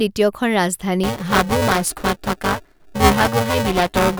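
Buffer tearing sets in at 1.03 s and continues to the end of the speech. The writing side and the reading side of the playback ring buffer have drifted until they cross inside each period, so roughly a third of every block carries audio from about 5 ms earlier, spliced in with abrupt joins at both edges. The result is a rough, robotic buzz at 345 Hz, which fits a 128-sample buffer, riding on the speech wherever sound is present.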